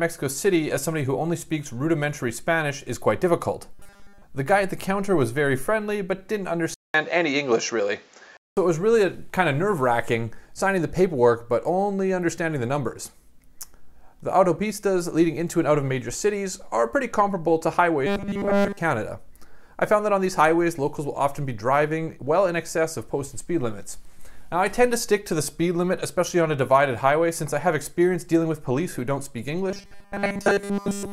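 The audio goes robotic three times, at 3.74 to 4.23 s, 18.07 to 18.79 s, and from 29.71 s right through to the end at 31.12 s. In each stretch the sound collapses into a rigid, metallic 200 Hz buzz that only loosely tracks what's underneath. That's likely robotic sound from repeated short buffers. New audio isn't arriving in time, so the same tiny slice, about 5 ms judging by the pitch, gets looped over and over, and practically none of the real material comes through.

Between 6.74 and 8.57 s there's a different problem. After a 200 ms gap the tone turns dull and boxy, with a level change of about 5 dB and a faint new noise floor sitting well below the signal. That pattern points to the input likely being switched to a poorer device, a narrower-band mic or headset path with its own character, before things come back to the original sound.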